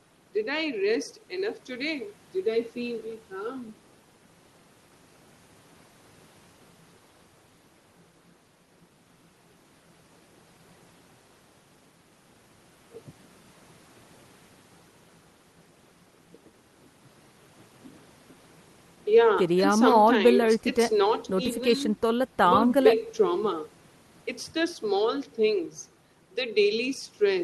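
Nothing stood out on listening to this speech recording, which comes across as it would through an ordinary call connection.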